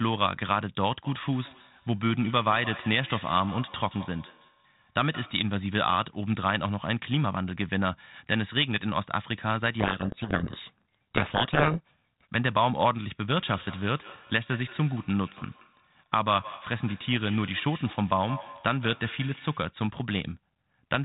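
Speech that twice repeats itself in thin, ringing copies about 150 ms apart, from 1.05 to 5.54 s and from 13.34 to 19.75 s, peaking about 16 and 17 dB below the talker: feedback echo between two devices, where one device's microphone re-captures another device's playback. Between 9.8 and 12.33 s the speech drowns in harsh distortion, a codec payload misread in which the decoder takes the bits of each G.726 code word in the wrong order.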